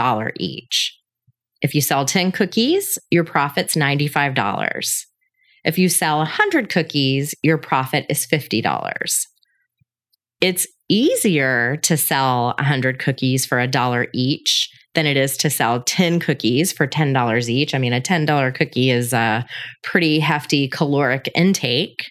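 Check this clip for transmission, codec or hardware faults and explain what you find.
No faults found in this clip.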